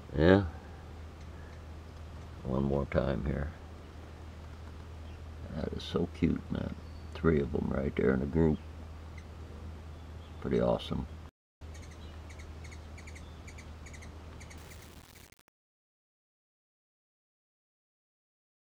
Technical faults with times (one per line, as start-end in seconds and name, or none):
14.57-18.60 truncation distortion on a fade